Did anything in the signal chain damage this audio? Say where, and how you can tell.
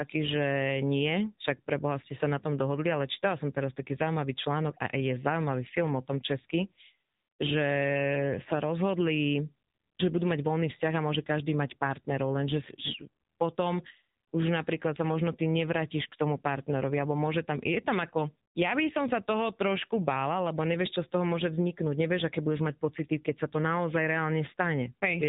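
Yes, at the codec stage: AMR narrowband mobile codec damage throughout. Its pulse-driven vocal-tract model makes the speech buzzy and synthetic, fitting a low rate near 7.4 kbps, and a spectrogram stops dead at 4 kHz.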